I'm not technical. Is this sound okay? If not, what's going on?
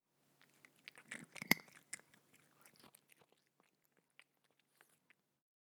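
No. Between 2.67 and 3.25 seconds the volume drops in small jumps, about ten a second, instead of gliding down. Each jump leaves a tiny click, so you hear a ticking, zipping texture. This is called zipper noise.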